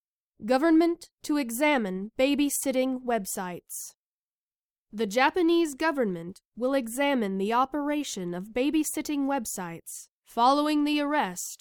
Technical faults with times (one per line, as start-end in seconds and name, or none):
none